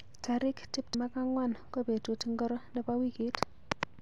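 Speech with compressed frames skipped at 0.94 s: roughly a tenth of a second vanishes, about three 32 ms frames, leaving an abrupt spectrogram discontinuity.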